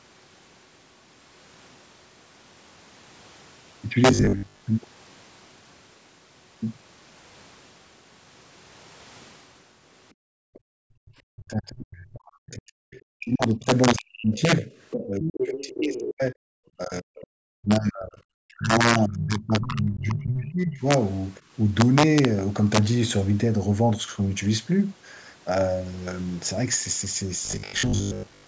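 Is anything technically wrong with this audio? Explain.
Yes, there are several faults in this speech clip, and the call's normal microphone processing, which takes out the lowest bass, sits alongside them.

Integer overflow runs through the whole clip. The level is pushed about 5 dB past full scale, and a small fraction of samples exceed the maximum. Instead of being limited, those peaks wrap around to the opposite extreme of the range. The peaks therefore carry abrupt, violent cracks, far harsher and more sudden than the flattened edge of ordinary clipping.

Robotic sound from repeated short buffers appears from 4.11 to 4.61 s and again from 27.45 to 28.47 s. The voice becomes a stiff metallic buzz at 50 Hz that loosely tracks the speech. The likely cause is audio arriving too slowly, so the software keeps replaying the last short block, which fits a 20 ms buffer, while real audio is dropped. 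The repeats make up most of the first stretch and about half of the second.

Background gated by the echo canceller occurs from 10.14 to 11.07 s. The room tone falls away by up to about 40 dB for close to a second, then returns. The canceller clamped the microphone down hard while the loudspeaker was active. It released once playback eased, so the background sound reappears.

The other side's voice leaking through shows up at 10.54 to 10.59 s and 12.92 to 13.01 s as faint scraps about 30 dB below the talker. From 14.57 to 16.08 s it becomes a longer, clearer passage only about 10 dB down. The likely cause is far-end audio from the loudspeaker reaching the microphone and being only partly removed by echo cancellation.

Speech suppressed in double talk occurs from 11.35 to 14.67 s, 15.06 to 16.35 s and 16.77 to 20.86 s. The main voice dips and breaks up. It drops by up to about 40 dB in the first and third spans and about 25 dB in the second, with several seconds affected overall. 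This is likely the canceller failing to tell local speech from the overlapping far-end echo and attenuating both together.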